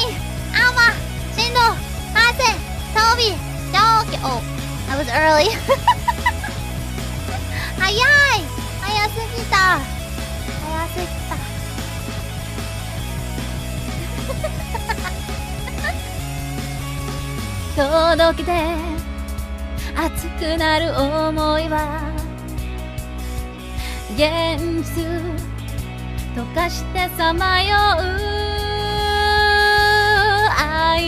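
Mains hum runs throughout: power-line leakage puts a steady, fixed 60 Hz drone fairly close to the signal's level, unlike the unpitched wash of rumble.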